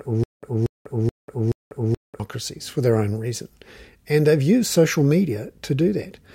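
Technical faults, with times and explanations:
0.0 to 2.2 s, stutter with silent gaps: the speech is already caught in a loop when the clip opens. A fragment of about 235 ms keeps coming back four times, each followed by roughly 192 ms of dead digital silence, so the bursts land every 428 ms or so. That steady repeat-then-nothing rhythm is likely the player or stream stalling and replaying its last chunk at each retry, and whatever should have played there is gone.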